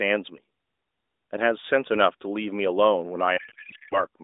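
From 3.38 to 4.03 s, a codec payload misread: the receiver unpacks octet-aligned AMR frames as if bandwidth-efficient, so the speech collapses into garbled warbling noise that barely tracks it.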